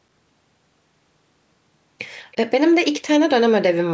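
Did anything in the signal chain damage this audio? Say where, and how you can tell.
Yes. At the call-processing stage there is a brief echo leak from 2.32 to 2.36 s: a faint scrap of the speech returns about 325 ms after the original, very quiet and far below the direct sound. That fixed, long delay separates it from room reverberation, which would trail off smoothly rather than arrive as a discrete copy. The likely cause is a far-end loudspeaker whose echo canceller let a fragment of its pickup through and sent it back.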